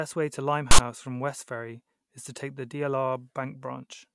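Right after "way to", at about 0.71 s, there's a harsh little rasp that runs until about 0.79 s, so roughly 70 ms of it. That's file tags played as audio: a chunk of text metadata got fed to the decoder as if it were sample data. Since text bytes sit in a narrow range, the result is a loud, buzzy rasp pushed off to one side of zero, and it starts and stops with hard, abrupt edges.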